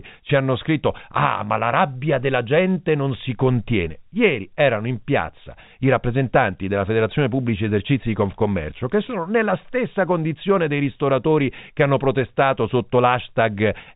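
Nothing goes wrong anywhere in the recording; the speech simply carries the narrow, telephone-like sound of G.711 coding, with everything above 4 kHz cut off as that format always does.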